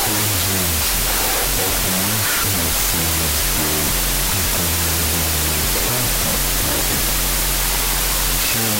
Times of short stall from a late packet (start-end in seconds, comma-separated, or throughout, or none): none